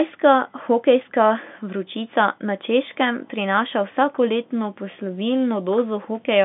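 Nothing here counts as a fault: the speech comes through a normal G.711 telephone line, so it sits in the usual band from about 200 Hz to 3.6 kHz with nothing going wrong along the way.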